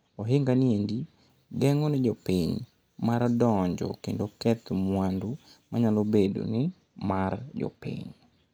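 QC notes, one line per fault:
1.30–6.26 s, pre-emphasis left on: between "ni endi" and "ni mar", a 50 µs FM-style treble lift goes uncorrected, so 10 kHz sits about 11 dB above 1 kHz. Speech turns thin, bright and sibilant, and the spectrogram's upper bands brighten progressively above about 3 kHz.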